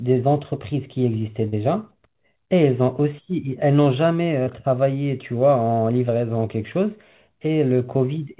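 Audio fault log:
1.48–1.57 s and 4.43–4.49 s, short concealed packet loss: about 40 ms of the call arrived too late for the decoder both times, so the receiver extended the preceding sound to cover it, 41 ms of synthetic fill at 1.48 s with 10 ms then trimmed away, and 31 ms at 4.43 s. Each patch blends back into the real signal, heard as a brief smear or wobble within telephone-band audio capped near 4 kHz, which fits G.711 mu-law.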